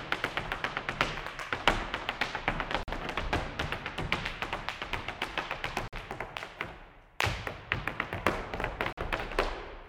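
The audio was delivered in 3-second chunks, and a stretch of silence was left at each join instead of the chunks being butted together, a gap between chunks. All of the sound survives, but it is interrupted three times: at 2.83 s, 5.88 s and 8.93 s, each hole lasting about 48 ms. These are short holes in the sound, recurring at a steady interval of just over 3 seconds.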